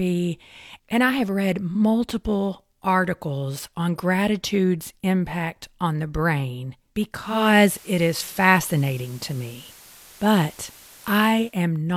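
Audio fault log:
7.11–11.64 s, digital radio blending to analogue: the receiver crossfades over 471 ms to FM, adding hiss roughly 25 dB down and a level shift of about 3 dB.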